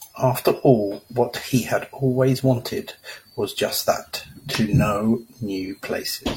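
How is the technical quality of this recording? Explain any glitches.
Two brief glitches interrupt this speech recording.

At 4.55 s there is a sharp snap laid over the speech, an electrical switching spike. It is most likely an arc from a nearby switch, motor or static discharge that the audio line picked up, adding a click over the sound.

From 5.64 to 5.71 s, about 43 ms of audio turns into a smeared, noisy or phasey patch. This is AAC frame loss with concealment. The decoder rebuilt the missing stretch from the last good spectrum, and the gap's length fits a single lost frame.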